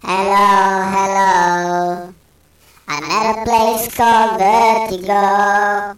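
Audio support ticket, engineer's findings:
No technical faults found in the signal path across the recording, and no dropouts, distortion or level problems that would call for further investigation.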